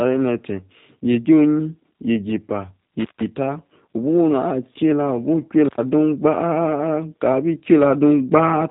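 From start to end, the speech carries plainly audible G.729 codec damage. Nothing above about 3.8 kHz survives. Each short frame is rebuilt from a vocal tract model, a pitch estimate and a few pulses. That leaves a rough, synthetic edge, which fits an 8 kbit/s VoIP link.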